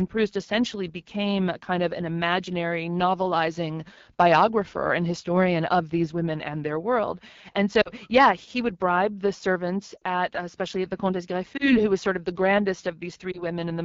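Speech, carried throughout by the AMR wideband (HD Voice) codec at 8.85 kbit/s, the second-lowest rate. At that rate the pulse-driven model of the vocal tract has too few bits to follow the voice accurately below 6.4 kHz, and the band above it is filled with shaped noise. The result is plainly audible codec damage: a rough, raspy texture across the whole clip.

On top of this, lost AMR speech frames occur four times. Radio errors corrupted frames, and the decoder filled each gap by repeating the last good pitch and vocal tract settings at falling gain. This produces a short smeared dip or warble. The gaps fall at 7.81 to 7.90 s, just before "yeah he would bribe"; at 9.97 to 10.03 s, between "would bribe the servants" and "at uh especially at"; at 11.57 to 11.81 s, before "who was sort of"; and at 13.31 to 13.41 s. The first two sound like about 40 ms of concealment, and the last two about 20 ms. 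Each is followed by a moment of weak, rough voice.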